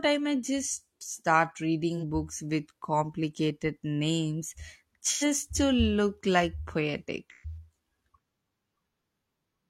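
At 1.97 to 2.03 s, after "I might just start", AAC frame loss with concealment leaves a brief smeared, phasey patch. Again at 5.12 to 5.24 s, before "to look like", and at 7.30 to 7.57 s, the lost stretch grows from about 43 ms to 85 ms and 128 ms, which fits one, two and three frames. The decoder fills each gap from the last good spectrum, so it sounds noisy and blurred rather than dropping to the hard silence of a plain dropout.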